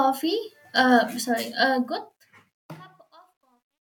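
Truncation distortion on the fade runs from 1.6 s to the end of the speech, worst from about 2.77 s onward. The fade-out begins around 1.6 seconds in, but the gain stage appears to keep only about 12 bits without dither. As the level sinks toward the smallest step, the waveform collapses into coarse square steps, so the tail turns gritty.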